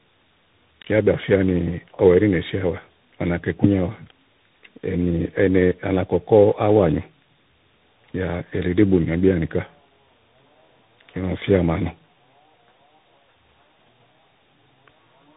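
Speech with tandem speech coding throughout: the sound has passed through several codecs in a row, decoded and re-encoded at each hand-off, so every stage compounds the last one's damage. The result is rough, muffled and warbly, with nothing above 3.8 kHz. The slope-tracking graininess points to CVSD at both ends, and the smeared, watery texture fits an AMR-NB stage in the middle.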